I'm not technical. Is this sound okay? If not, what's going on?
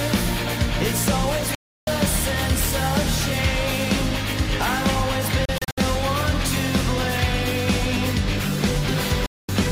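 No, there are three short gaps where the sound drops out. This is a digital broadcast dropout: the receiver briefly lost a clean signal and went silent until good data returned. It cuts out from 1.55 to 1.88 s, stutters in several tiny holes between 5.45 and 5.78 s, and cuts again from 9.26 to 9.49 s. Unlike a weak radio station, there's no hiss or crackle, just near-instant silence, and the missing sound is simply gone.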